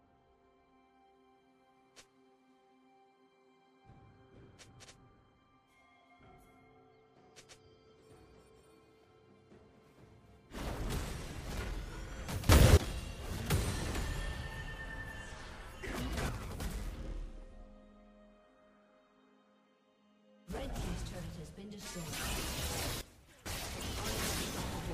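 Three sudden gain jumps shift the sound and its background noise together: up about 18 dB at 12.49–12.77 s, down about 6 dB at 16.29–16.60 s, and down about 16 dB at 23.01–23.46 s. Each likely comes from a digital gain step applied without a ramp.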